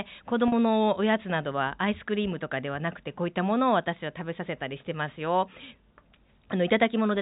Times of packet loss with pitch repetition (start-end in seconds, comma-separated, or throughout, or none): 0.48-0.52